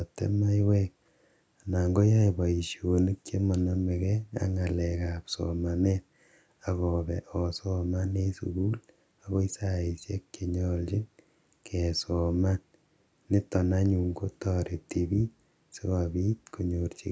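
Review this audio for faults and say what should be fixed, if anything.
Nothing here needs fixing: the speech has gone through a call's microphone processing, which trims the lowest bass and carries nothing above 8 kHz, as that path is meant to.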